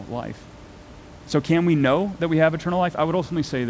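Speech carried over a call path whose band stops at 8 kHz, which fits a wideband codec such as G.722, with its usual coding noise and room noise sitting about 26 dB below the speech.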